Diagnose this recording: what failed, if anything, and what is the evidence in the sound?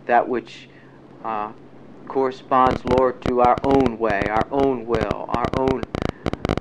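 A train of clicks runs from 2.67 to 6.59 s, roughly fifty irregular pulses at 12.5 per second, peaking about 15 dB above the sound. This is likely analogue interference in the wiring. Unlike one-off glitches, the pulses are repeated and similar.

Dropped samples cause one sharp click at 3.58 s, where the waveform jumps across a couple of missing samples. The cause is probably a converter or buffer slip. This is a single isolated event, not part of the ticking pattern.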